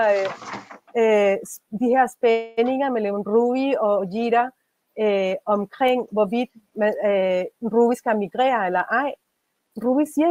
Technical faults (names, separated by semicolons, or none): call audio freeze; jitter buffer speed-up